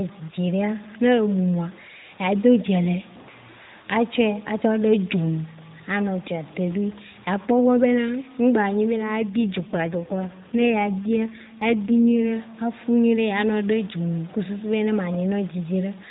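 Grainy distortion runs through the whole clip. It rides on the voice and changes with it. Quiet stretches turn gritty. The likely cause is low bit depth without dither, with truncation to roughly 6 bits. The error sits about 25 dB below the signal.

From 9.16 to 12.29 s comes an AMR rate drop. The mobile codec's band stays the same and the sound never breaks. The voice turns rougher, buzzier and more synthetic. This fits a step down from 12.2 to 5.9 kbps.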